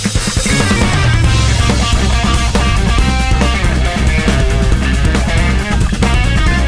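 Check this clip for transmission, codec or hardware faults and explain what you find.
Nothing in the signal points to a transmission, codec or hardware fault; it stays continuous and stable throughout.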